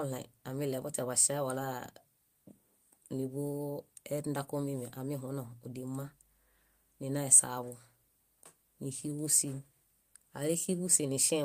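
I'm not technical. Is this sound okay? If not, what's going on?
Yes, no problems here.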